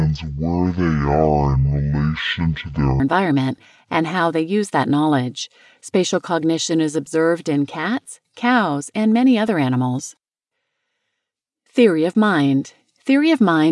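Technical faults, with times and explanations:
0.0–3.0 s, wrong sample rate: the speech runs at half speed and drops a full octave, 12 semitones, because the samples are clocked out at half their capture rate with no conversion, which fits 48 kHz audio being played at 24 kHz.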